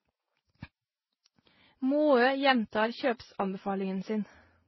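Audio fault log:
throughout, transcoding between lossy codecs: nothing above 5.8 kHz, with several distinct artefacts stacked together: each later codec adds its own artefacts on top of the earlier ones. That mix, rather than one codec's signature, points to a likely chain of re-encodes, consistent with HE-AAC, then Vorbis, then low-rate MP3.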